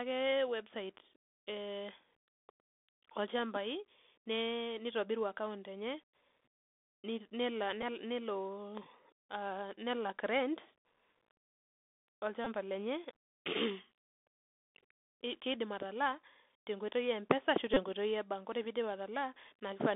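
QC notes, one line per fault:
throughout, Bluetooth CVSD headset codec: The link carries the sound as a 64 kbit/s one-bit up/down stream with an adapting step, so nothing above about 3.5 kHz survives. Sibilants come out scratchy, loud bright syllables smear as the step lags, and a granular hiss sits underneath.
7.82, 12.45 to 12.47, 17.74 to 17.80, Bluetooth headset packet repeated: Headset packets dropped and the chip re-decoded the previous packet's bits. The runs, about 7.5 ms, 15 ms and 26 ms, loop every 3.75 ms, giving a short buzz near 267 Hz.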